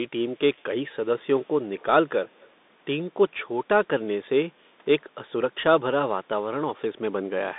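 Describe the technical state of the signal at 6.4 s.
At 6.4 s the signal carries the Bluetooth CVSD headset codec distortion that runs through the whole clip. The speech is squeezed into a narrow band of about 200 Hz to 3.7 kHz, with nothing above 3.8 kHz. The one-bit delta coding, which fits a 64 kbps link, leaves plainly audible grainy damage.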